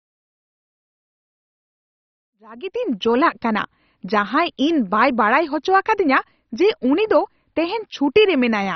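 Right from the start and all the way through, the speech has that dull, gurgling, granular quality you get from MP2 compression, likely a low-rate encode around 32 kbps. There's nothing above about 6.1 kHz because the top sub-bands have been switched off entirely. The bands that survive are coarsely quantised and flicker in and out, which gives the swirly grit. The gentle fade-in finishing around 3.31 s carries the same damage.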